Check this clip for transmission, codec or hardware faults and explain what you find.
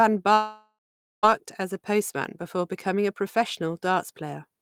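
One transmission fault is present in this speech. From 0.33 to 1.25 s, a long network dropout: the last sound stretches into a fading buzz, then about 0.46 s of silence, and speech returns with 0.9 s lost, likely from packets never arriving. Unlike a short glitch, concealment runs out before audio resumes.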